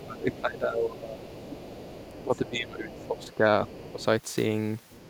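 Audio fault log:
0.0–1.27 s, 2.13–3.45 s, 3.79–4.05 s: speech suppressed in double talk. The speech dips by up to about 15 dB, likely because the echo canceller clamped down while both sides talked.
0.32–0.41 s, 1.25–2.5 s, 2.89–3.35 s, 3.68–4.05 s, 4.9–5.09 s: other side's voice leaking through. A faint second voice sits about 20 dB under the talker, and about 30 dB under at the end. It's likely loudspeaker echo the canceller didn't fully remove.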